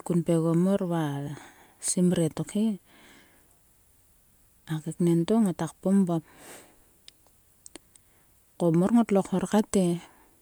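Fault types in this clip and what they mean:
No technical faults can be heard in this speech recording; the signal stays continuous and stable throughout.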